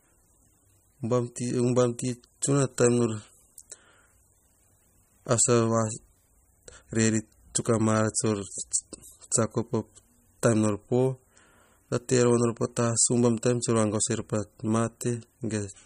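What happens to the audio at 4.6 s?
At 4.6 s, as throughout, the speech sounds watery and swirly with nothing above 15.1 kHz, likely MP3 compression starving weak frequency lines, unlike a plain low-pass filter.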